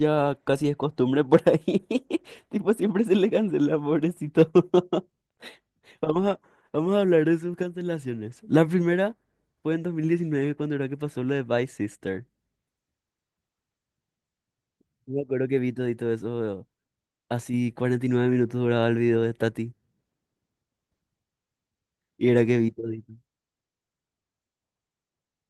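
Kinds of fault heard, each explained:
No faults detected in the speech, with only the light Opus voice compression at 24 kbps audible.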